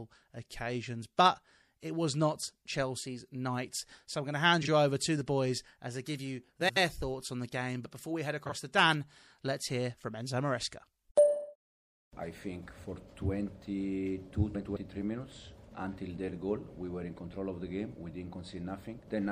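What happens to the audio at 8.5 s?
From 8.46 to 8.52 s the audio has frames out of order: two adjacent blocks, each about 26 ms long, play in swapped order, which fits single swapped frames of the MP3 stream. The result is a brief garbled flutter. Unlike a dropout or skip, nothing is missing and the timing afterward stays intact. The material is only rearranged.

Around this moment, as through the whole clip, the sound is watery and swirly, with metallic chirps on bright, hissy content and smeared attacks. The likely cause is MP3 compression at a low rate, around 64 kbps. With too few bits, the encoder switches weak frequency lines on and off between frames. That flickering distinguishes it from a plain low-pass filter, which removes the treble without any swirl.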